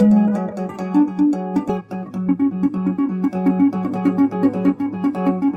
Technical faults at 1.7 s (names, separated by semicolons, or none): skip ahead